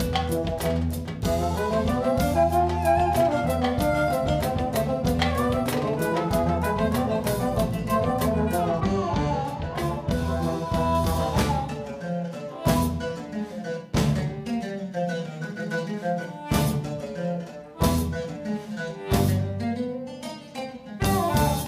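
From 8.80 to 10.95 s, de-emphasis is applied wrongly: an unneeded treble cut rolls off the top end, about 11 dB down at 10 kHz, so the sound goes dull and muffled.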